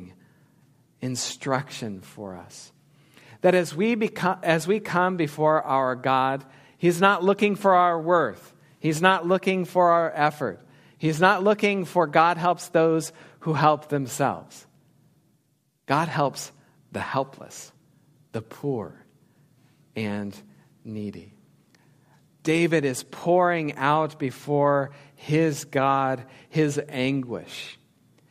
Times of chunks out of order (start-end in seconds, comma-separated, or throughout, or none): none